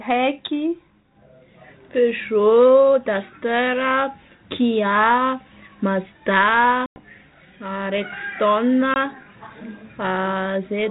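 At 6.86 s the speech drops into a hard-edged hole of about 100 ms, and at 8.94 s a second, 20 ms gap follows. This is packet loss on an ADPCM call, with the band-limited telephone sound fitting G.726 at 32 kbit/s. Lost audio was replaced by silence, leaving the decoder's predictor and step size mismatched. Speech resumes with brief distortion before settling. A waveform shows flat near-silent stretches with abrupt edges, and a spectrogram shows blank vertical bands.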